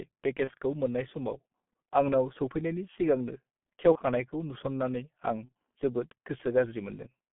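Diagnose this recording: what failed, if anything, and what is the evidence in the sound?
The codec stage is at fault throughout. This speech runs through a G.723.1 codec, and the damage is heavy. The band stops near 150 Hz at the bottom and 3.5 kHz at the top, so the sound is muffled and thin. Voices turn hoarse, and consonants blur into each other. That points to a bitrate around 6.3 kbit/s. The codec rebuilds speech from a coarse model that updates only once per 30 ms frame, so fast detail is lost.

The network stage adds VoIP packet loss concealed by the speech codec. There are three events: 0.45 to 0.52 s, 3.92 to 3.99 s and 5.45 to 5.49 s. Each brief gap is filled by stretched sound that fades, and the speech then stays weak or distorted for a short while. Each event fits one lost 30 ms frame. The decoder repeats its last pitch and filter at falling gain, and later frames build on that faulty state.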